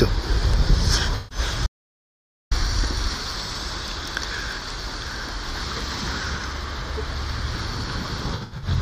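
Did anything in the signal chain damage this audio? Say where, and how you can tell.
Yes. Smeared, phasey patches at 1.16–1.38 s and scattered across 8.34–8.68 s point to AAC frame loss with concealment: the decoder rebuilt lost frames from the last good spectrum.

From 1.67 to 2.51 s the sound cuts to dead digital silence with no room tone. This audio dropout to silence likely comes from a lost input link, with silence recorded.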